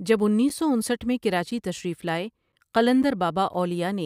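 Short, hard-edged holes of about 7 ms break into the speech at 0.49, 1.00, 1.51, 2.02, 2.52, 3.03 and 3.54 s, one every half second. This is a gap between chunks: the audio arrives in 0.5 s pieces with a sliver of silence left at each join.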